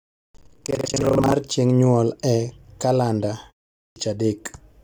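From the start to 1.34 s the speech carries buffer tearing: a steady robotic rattle at about 23.4 Hz, which fits a 2048-sample buffer being read while it is still being written. In each period a large share, roughly two fifths, replays audio from about a tenth of a second earlier, with hard joins at both edges. Unlike dropout crackle, the buzz is periodic and locked to that rate, and it exists only while sound is present.

At 3.87 s, after a 0.43 s pause, the onset is a clipped start after a pause: about 91 ms of the returning speech is swallowed while the output device wakes and relocks, so the sound begins abruptly, already partway in, without its first sounds. This differs from muted pauses, which fade only the background in the gaps and return in time without losing any speech.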